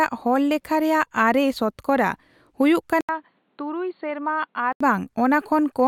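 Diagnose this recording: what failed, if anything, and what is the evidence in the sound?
The input was likely switched to a poorer device at the driver level. At 3.01 s the speech goes silent for 80 ms, then returns dull, with nothing above 4.5 kHz, slightly quieter and over a faint new noise floor, until it clears at 4.81 s.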